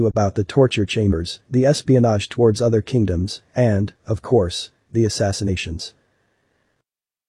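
Compressed frames are skipped at 1.03 s, after "about the torture", and 5.44 s, after "of course the": about 50 ms vanishes, leaving the audio jumping ahead.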